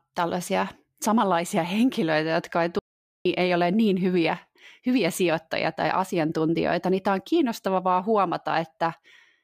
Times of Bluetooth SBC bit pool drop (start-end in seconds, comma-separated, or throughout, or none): none